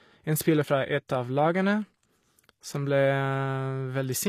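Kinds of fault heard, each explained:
HE-AAC compression: The speech has plainly audible coding damage throughout, and nothing is present above 15 kHz. The treble sounds synthetic rather than natural. It is likely HE-AAC at a low bitrate, which fits something around 24 kbps. This codec keeps only the lower spectrum and rebuilds the top by copying lower bands upward under a coarse envelope. The rebuilt harmonics do not match the real ones, so s sounds turn gritty and lispy.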